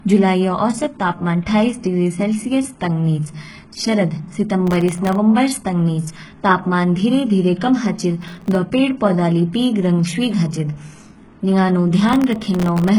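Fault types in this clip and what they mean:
HE-AAC compression: The speech has heavy codec damage throughout, with nothing above 11.5 kHz. The treble that remains sounds synthetic, with s sounds gritty and lispy and the harmonics failing to line up at the top. This points to spectral band replication at a very low bitrate, around 12 kbps, so HE-AAC is the likely cause. Plain low-bitrate codecs sound muffled instead: they lose the treble outright rather than rebuilding it in this bright, metallic way.
processor overload crackle: Three bursts of gritty tearing ride over the speech, from 4.67 to 5.15 s, 8.22 to 8.55 s and 12.09 to 12.89 s. Each burst is a few dozen tiny silent gaps with hard edges, each about as long as a buffer of roughly 0.7 ms. Unlike a single dropout or a clipping crackle that tracks loudness, these come in clusters and stop abruptly once the load passes.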